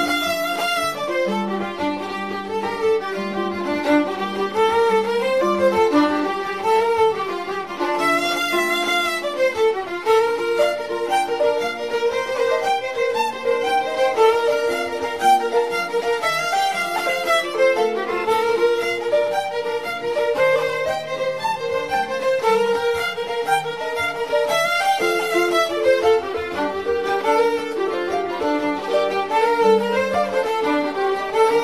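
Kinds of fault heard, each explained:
No faults can be heard anywhere in the clip, with no dropouts, clicks, distortion or level problems at any point.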